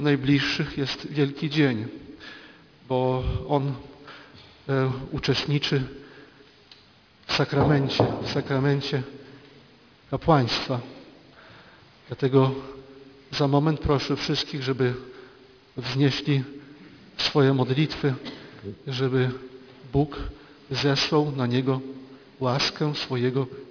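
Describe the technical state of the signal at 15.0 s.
Aliasing is present at 15.0 s, as it is across the whole clip. The sound was downsampled without an anti-alias filter, which fits a drop from 48 kHz to 11 kHz. Content above 5.5 kHz folds back as unrelated, gritty tones, roughly ten decibels below the signal.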